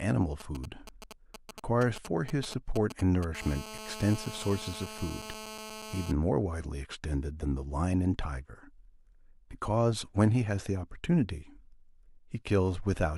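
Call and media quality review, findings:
GSM signalling bursts, 0.4 to 3.2 s: galloping dit-dit-dit of brief 217 Hz buzz groups, around 15 dB below the speech. Nearby 2G handset sending short radio bursts, rectified in the audio path. Intermittent grouping separates it from steady call buzz.

GSM phone buzz, 3.35 to 6.12 s: continuous hard, raspy 217 Hz buzz, harmonic-rich, about 13 dB below the speech, unrelated to the speech. Handset in an active call, TDMA pulses rectified by the audio stage. Unbroken, unlike the earlier signalling gallop.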